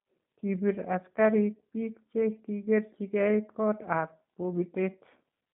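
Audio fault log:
throughout, G.729 codec: the speech is confined to 150 Hz to 3.7 kHz and sounds plainly rough and synthetic, fitting 8 kbit/s G.729A rebuilding each frame from a filter, a pitch predictor and sparse pulses. A spectrogram shows a hard ceiling near 3.7 kHz and empty lows.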